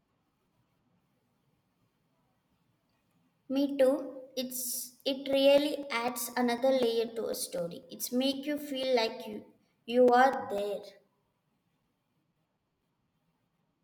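From 5.33 s to 13.58 s, periodic USB or driver dropouts interrupt the speech every 0.25 s. Around thirty times, a few milliseconds of audio are lost and replaced by silence, probably as a background task stalls the audio path. Each gap is heard as a regular tick wherever the signal is present.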